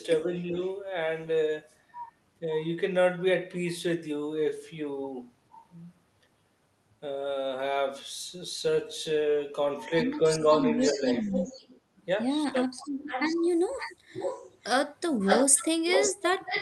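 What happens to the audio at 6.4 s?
Nothing goes wrong at 6.4 s: the speech runs on intact through that moment, carried as before by the call path's Opus coding, whose bandwidth reaches up to about 12 kHz.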